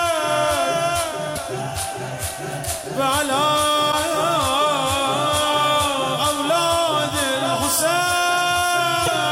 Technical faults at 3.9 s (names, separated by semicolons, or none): broken MP3 bit reservoir